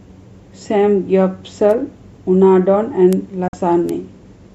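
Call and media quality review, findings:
Bit error spike at 1.71, 3.13 and 3.89 s: single-sample ticks, broadband and unrelated to the speech, from a flipped bit in memory or a digital link. Instant return distinguishes them from dropouts.

Digital broadcast dropout, 3.48 to 3.54 s: receiver muted with a fast fade of about 3 ms, leaving a 48 ms hole that fits two lost frames. Real missing audio, not a tick.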